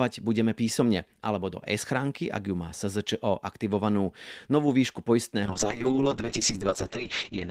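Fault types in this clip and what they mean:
Call bitrate drop: from 5.46 s to the end, highs above 8 kHz vanish and speech turns coarse, which fits an encoder squeezed from 32 to 7 kbps.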